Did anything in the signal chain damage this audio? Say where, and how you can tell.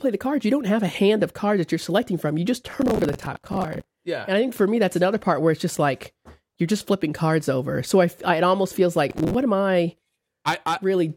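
Yes. Processor overload crackle at the driver or buffer stage, 2.71–3.84 s and 9.10–9.34 s. Missed buffers of around 10 ms replay old audio as gritty crackle.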